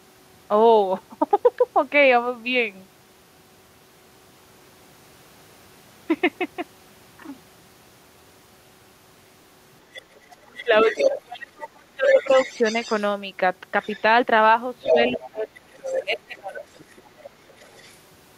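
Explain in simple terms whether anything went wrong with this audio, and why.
Two problems show up in this speech recording.

Other side's voice leaking through: a second voice is heard from 9.9 to 11.2 s, nearly as loud as the talker, then faintly at 12.1 to 13.1 s and 13.8 to 14.0 s, and more noticeably from 14.8 to 18.0 s. The likely cause is the far end playing over a loudspeaker, with the echo canceller failing to scrub it from the microphone.

Speech suppressed in double talk: from 10.4 to 12.6 s, while that second voice is present, the talker's speech drops sharply, for roughly one and a half seconds in total. The same happens more mildly from 14.9 to 16.7 s, for about a second. Both sides were talking at once, and the echo canceller likely turned everything down because it could not tell the two apart.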